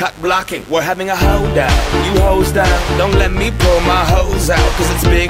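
Switching spikes from a dimmer, rectifier or unshielded run leak into the chain at twice the 50 Hz mains rate, adding mains buzz throughout. Its harmonics climb into the kilohertz range, giving a steady, raspy buzz roughly 25 dB under the sound.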